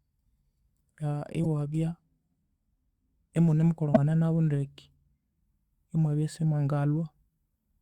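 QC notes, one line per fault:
1.43–1.46 s: damaged data in a compressed stream. A 22 ms blip breaks into the speech as the decoder misreads corrupted frames, loses sync and hunts for the next valid frame header.
3.90–3.97 s: damaged data in a compressed stream. The same fault, here a longer 66 ms disturbance, as more corrupted data passes before the decoder recovers frame sync.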